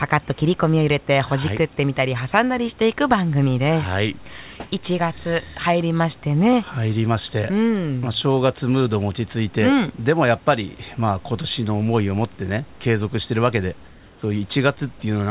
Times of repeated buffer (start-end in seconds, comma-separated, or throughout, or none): none